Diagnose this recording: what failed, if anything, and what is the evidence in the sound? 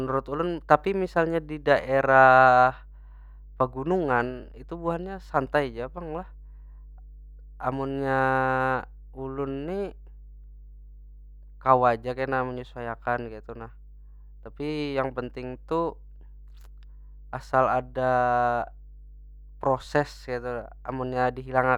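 Mains hum sits under the speech for the whole clip: a steady 50 Hz tone with low harmonics, roughly 20 dB below the signal. The fault is in the analogue wiring, where a ground loop or nearby transformer is coupling the power line into the signal path.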